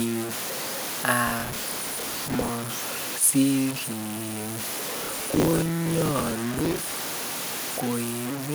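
Low bit depth without dither runs through the whole speech clip. The grainy distortion tracks every syllable and sits only about 10 dB below the voice, which fits roughly 4 bits. The likely cause is samples truncated with no dither, so the rounding error follows the signal and quiet tails break up.

Processor overload crackle comes in from 1.27 to 2.49 s and again from 4.98 to 6.92 s. Buffers of around 10 ms repeatedly missed their deadlines and were filled with stale audio. Their hard edges stack into a gritty, tearing crackle over the speech until each burst ends.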